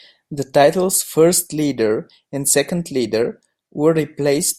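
No technical faults are audible.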